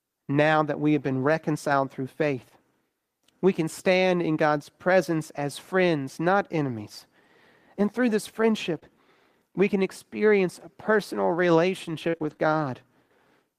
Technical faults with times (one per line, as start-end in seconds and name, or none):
8.75-8.85 lost packet rebuilt from error correction
8.79-8.83 short concealed packet loss
12.09-12.47 repeated packet loss (robotic sound)